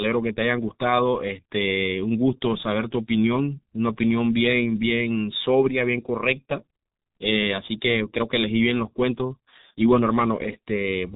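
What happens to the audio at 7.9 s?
At 7.9 s, as throughout the clip, G.723.1 codec coding applies: slow 30 ms frame updates and a 3.8 kHz cut-off leave the speech muffled, hoarse and smeared, fitting roughly 6 kbit/s.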